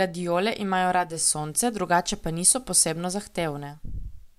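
Digital radio blending to analogue runs from 0.93 s to 3.99 s: the receiver lost its digital stream and cross-faded over about 0.4 s to the station's FM broadcast. Faint hiss rises, around 40 dB down, and level shifts about 1 dB.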